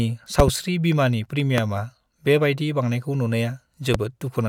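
Speech with loud pops: a double pop at 0.40–0.50 s, single pops at 1.58–1.61 s and 3.94–3.97 s. Each spikes about 20 dB above the speech, likely from a switch, static or driver glitch.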